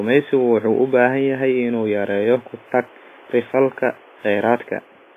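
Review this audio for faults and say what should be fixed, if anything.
Throughout the clip, a transform codec running at too low a bitrate has likely discarded much of the signal. The heavy damage fits WMA compression at around 24 kbps. Its long blocks spread quantisation noise across tens of milliseconds around each syllable, so the speech rings and sounds washy, with a hiss that breathes with the voice. Weaker spectral detail has been zeroed and is simply gone, while the room noise sits about 29 dB below the speech. To prevent this, encode at a substantially higher bitrate or with a more capable codec, and keep an uncompressed master.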